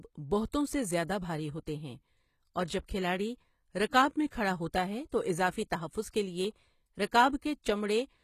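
From start to finish the speech carries plainly audible coding damage, most likely HE-AAC compression at a low bitrate, which fits something near 20 kbps. The treble is not the original signal but lower bands copied upward and shaped by a coarse envelope, so its harmonics fail to line up with those below, and s sounds come out gritty and metallic. On a spectrogram the upper region looks smeared and blocky, with nothing at all above 14.9 kHz.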